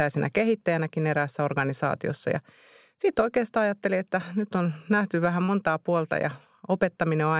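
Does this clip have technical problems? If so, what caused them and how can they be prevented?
Yes. At 5.44 to 5.51 s, between "nyt on nähty vähän" and "puolta ja", there is a short concealed packet loss. About 40 ms of audio never reached the decoder in time. The receiver patched the gap by extending the preceding sound, then faded back into the real signal. The result is a brief smear in the speech. A steadier network path and a larger jitter buffer would prevent it. The band stops at 4 kHz, which fits a G.711 telephone codec.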